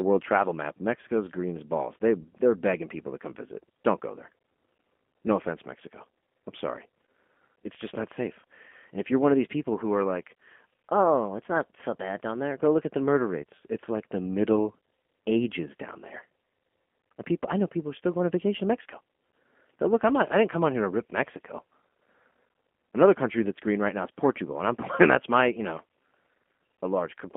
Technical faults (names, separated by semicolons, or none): G.729 codec